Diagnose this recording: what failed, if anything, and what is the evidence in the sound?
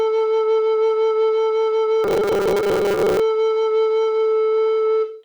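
Robotic sound from repeated short buffers, 2.04 to 3.20 s: a rigid 200 Hz buzz over the music, likely a starved driver buffer repeating 5 ms chunks.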